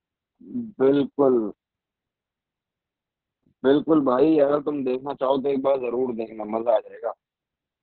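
Throughout, Opus voice compression at heavy damage narrows the speech to nothing above 4.6 kHz, suggesting roughly 6 kbps narrowband SILK, leaving it muffled, hoarse and slightly robotic.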